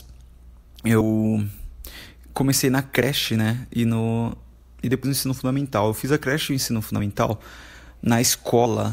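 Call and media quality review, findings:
Compressed frames skipped: decoder dropping whole frames (missing or rejected as damaged), so playback jumps ahead, which fits 32 ms frames. Jumps at 1.01 s, 3.02 s after "comecei na", and 5.04 s between "no e" and "no ensino fundamental", losing about a tenth of a second at 1.01 s and 5.04 s and about 70 ms at 3.02 s.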